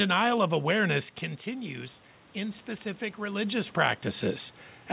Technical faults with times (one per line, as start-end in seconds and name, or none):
1.45-4.92 automatic gain rising